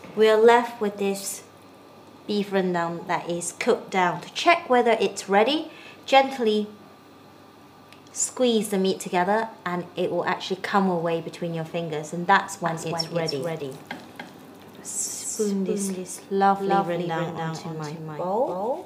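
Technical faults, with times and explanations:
12.66 s to end, doubled audio track: the audio is likely mixed in twice, via a slower second capture path or an edit holding two out-of-step copies. An abrupt, dry, full-band copy trails by roughly 300 ms, around 5 dB quieter.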